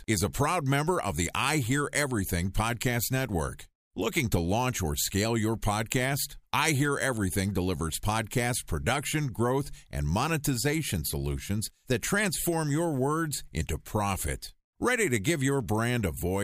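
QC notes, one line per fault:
No technical faults were found in the speech signal on listening.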